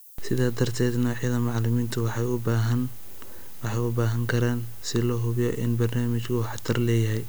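From start to finish the speech carries low bit depth with noise shaping: it is quantised to 8 bits, and the rounding error is fed back so it sits high in the spectrum. It sounds like a steady, thin hiss climbing toward the top, roughly 25 dB below the speech.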